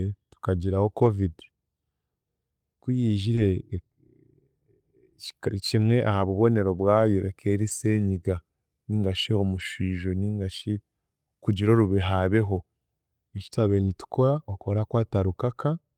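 This speech has seven stretches of lost packets rebuilt from error correction. Each was replaced by a low-bitrate copy carried in the next packet, so nothing drops out. The first spans 0.97 to 1.07 s, about 60 ms of rebuilt audio, which fits three lost 20 ms frames. The others fall at 3.37 to 3.39, 5.81 to 5.83, 7.67 to 7.69, 9.55 to 9.61 (about 40 ms), 12.55 to 12.57 and 13.87 to 13.89 s. Each patch sounds rougher and noisier than its surroundings.

At 3.35 to 3.39 s there is also a short concealed packet loss. One 20 ms frame never arrived in time, and no copy of it existed. The decoder filled the hole by extending the sound just before it, then blended back into real audio. The error-corrected frame follows directly. The result is a brief smear or wobble, and a short consonant there may be lost.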